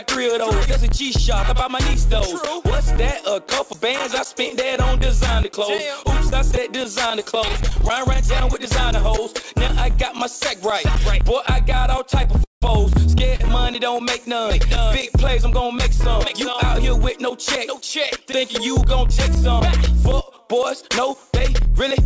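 From 6.29 to 7.83 s the sound turns choppy and robotic, with small pieces dropping out. This is repeated packet loss: 14 short holes, the longest about 13 ms, each patched by extending the previous sound, with about 90 ms lost in total.

At 12.44 s the audio freezes into a brief fading buzz and then about 150 ms of silence before picking up again at 12.63 s exactly where it left off. This call audio freeze was likely caused by packets held up in transit, which left the jitter buffer empty. About 180 ms of gap was inserted, and nothing is missing.

From 13.36 to 13.41 s a sound is held slightly too long, with a faint buzz. This is a short stall from a late packet. The buffer briefly ran dry and stretched the last sound by 40 ms until the packet arrived. No audio is lost.

Throughout, the call path's G.722 coding at 64 kbps leaves nothing above 8 kHz.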